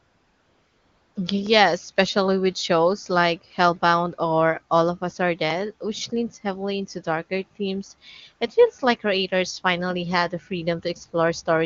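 AMR comfort noise fills the opening from 0 to 1.15 s. During that first stretch the sending phone judged the line silent and stopped transmitting speech frames, so the receiver generated a stand-in hiss from a rough summary of the background's level and spectral shape. The result is a steady, smooth noise bed rather than the real background sound, and it gives way when the speech begins. The AMR wideband (HD Voice) speech that follows sounds clear, which fits one of the codec's higher bitrates.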